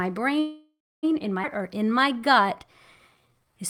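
A call audio freeze runs from 0.39 to 1.05 s, just before "in my". The last sound is stretched into a fading buzz or hiss that ends in about 270 ms of silence, likely because packets stalled and the jitter buffer ran dry. The speech then resumes intact after a 635 ms pause.

A skip ahead follows at 1.43 to 1.46 s, right after "in my". Roughly a third of a second of speech is discarded, and the two sides are spliced together with only a 7 ms join, so the speech lurches forward abruptly.

Jitter buffer slow-down appears from 1.58 to 2.47 s and again from 3.15 to 3.58 s. Repeated pitch periods stretch the speech to 90% speed, adding 93 ms, and then to 82% speed, adding 87 ms. The pitch holds while sounds drag.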